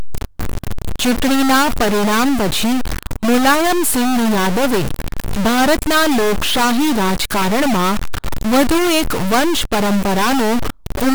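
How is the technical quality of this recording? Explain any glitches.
The technical quality is poor because of a stuck bit that runs through the whole recording. The speech is distorted from start to finish. One data bit is likely held at a fixed value by a faulty line or converter. About half the samples are shifted by that bit's weight. The pauses between phrases fill with noise instead of silence.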